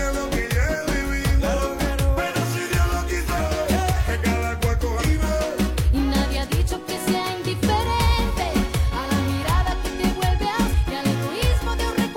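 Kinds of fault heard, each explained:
Damaged data in a compressed stream: Part of the coded audio was corrupted or lost. The decoder misreads those frames and searches for the next valid header. Each spot gives a brief chirp or blip, roughly 55 to 65 ms long, at 3.35, 4.97 and 10.68 s.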